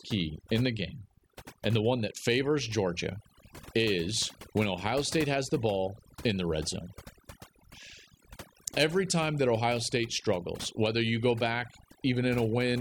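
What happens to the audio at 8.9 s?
Overdone noise removal is at work at 8.9 s, as it is across the whole recording. A noise reduction process set far too aggressively pulls individual frequency bands down or mutes them outright whenever they sit close to its noise estimate, and the softer components of the speech get swept away along with the noise. Around this moment the background drops and breaks up into twinkling, chirpy specks.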